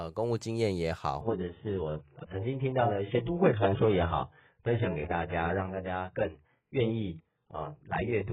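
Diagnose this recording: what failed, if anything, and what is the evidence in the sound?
The adaptive stream fell back to a lower bitrate, a network-driven switch to a much thinner rendition of the same AAC stream. At 1.21 s the speech changes abruptly with no gap or dropout. From there to the end, nothing above 3.8 kHz remains, so sibilants and consonant detail go dull and smeared, and coding artefacts rise. A cut-off that low, with that much codec damage, fits a rendition of around 8 kbit/s instead of the fuller one heard before.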